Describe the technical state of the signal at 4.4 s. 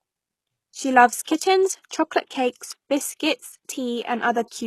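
At 4.4 s the speech carries HE-AAC compression, present throughout the clip rather than starting there, and the damage is plainly audible. The likely cause is a low-bitrate encode, fitting roughly 16 kbps. Only the lower spectrum is coded directly; the treble is rebuilt by copying lower bands upward under a coarse envelope, so sibilants lose their true detail. On a spectrogram, energy stops at a hard ceiling near 12.3 kHz, with the upper band looking like a smeared copy of the lower one.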